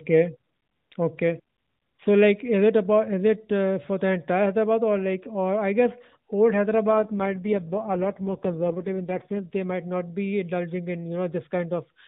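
From 6.93 s to 9.46 s, the speech goes through an AMR rate drop. The mobile codec has switched to a lower mode, likely because a weak radio link made the network trade speech bits for error protection. The change in quality fits a fall from 12.2 kbps to 4.75 kbps. The narrowband AMR sound stays the same width, and there is no gap. The voice turns buzzier, rougher and more synthetic. The lighter codec colouring returns at 9.46 s.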